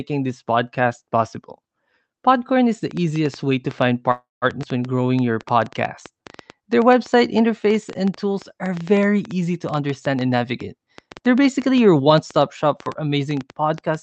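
Speech heard over a call link, with a train of clicks running from 2.91 s to the end. The clicks come about 6.7 times a second at an uneven pace. They tick over the speech and through the pauses, peaking a little above its level. Interference from nearby equipment or a faulty connection or power supply is the likely source. At 4.11 s a call audio freeze begins. It lasts until 4.45 s. Packets were likely held up and the jitter buffer ran dry. The receiver stretched the last sound into a fading buzz or hiss, then about 160 ms of silence. The 304 ms inserted delays everything after it, but nothing is lost. A skip ahead follows at 4.62 s to 4.65 s. Roughly a tenth of a second of speech is dropped. The two sides are joined by only a 5 ms bridge, so the speech lurches forward. Two jitter buffer slow-downs come next. From 4.96 s to 5.54 s the speech runs at 90% speed, gaining 65 ms. From 6.11 s to 6.63 s it runs at 94%, gaining 43 ms. 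Pitch periods were repeated, so sounds drag without any drop in pitch. Then a jitter buffer speed-up runs from 9.74 s to 12.19 s at 112% speed. Short pitch-period slices were cut, about 0.3 s in total. The speech sounds hurried at unchanged pitch. Through all of it the Opus coding caps the audio near 8 kHz, which fits a bitrate around 32 kbps.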